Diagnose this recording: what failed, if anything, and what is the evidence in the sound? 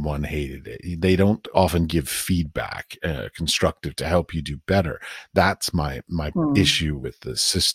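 The failure is at the codec stage: compressed frames were skipped, at 3.56 to 3.58 s and again at 7.03 s. At each point the speech jumps ahead by about one frame, roughly 20 ms. The decoder never played those frames, either because they were missing or because it rejected them as damaged. A buffer underrun would instead leave a gap or hard click and then resume without losing any time.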